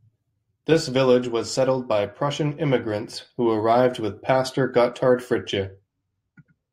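No technical faults detected anywhere in the speech recording.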